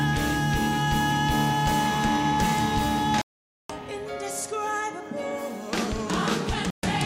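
Digital broadcast dropouts at 3.22–3.70 s and 6.70–6.84 s: the receiver lost valid frames and muted, leaving silent holes of about 480 ms and 128 ms.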